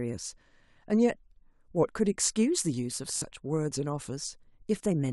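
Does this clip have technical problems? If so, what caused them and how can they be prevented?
Yes. There is a Bluetooth stutter from 3.16 to 3.22 s in this speech. Audio data failed to reach the receiver in time. The receiver kept replaying its last short buffer to fill the gap. That repetition is heard as a brief buzzing stutter. About 56 ms of sound is lost, which fits roughly three dropped packets. When playback resumes, it jumps ahead as though the audio had kept running. Keeping the devices close, with a clear line of sight and less 2.4 GHz congestion, helps prevent it.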